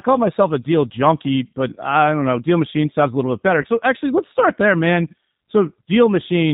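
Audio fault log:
throughout G.729 codec. The speech is plainly rough and synthetic, with nothing above 4 kHz, as the decoder rebuilds each frame from a filter, pitch and few pulses, which fits an 8 kbit/s codec.
3.62 to 3.66 s VoIP packet loss concealed by the speech codec. After "a little bit better", about 20 ms is stretched out and fades, pointing to one lost packet, and the voice stays weak into "actually let's start there".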